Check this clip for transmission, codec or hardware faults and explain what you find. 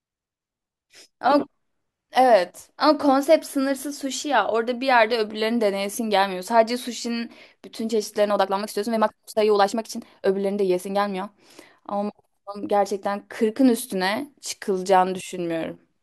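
One fault stands out in the speech: a time-stretched section from 8.26 s to 11.26 s, where the pace jumps to about 1.53 times normal speed. The likely cause is software squeezing that stretch of audio to fit a shorter slot, holding the pitch steady by discarding short slices of the waveform rather than simply playing it faster. The result is rushed delivery with the voice's pitch unchanged, and the tempo snaps back at 11.26 s.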